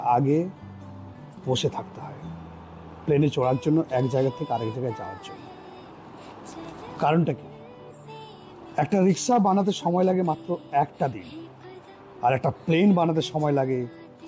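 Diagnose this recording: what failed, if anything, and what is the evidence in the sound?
Nothing failed; no stage shows a fault.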